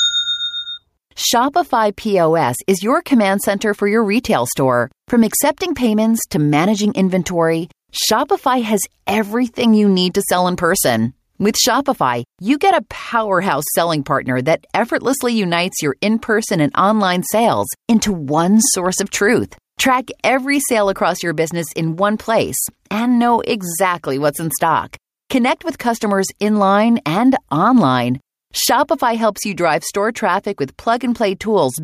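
Speech with gain pumping throughout: the level is pulled down on every loud syllable, swinging by about 5 dB, likely from input gain set far too high with a fast limiter clamping it. The waveform looks flattened.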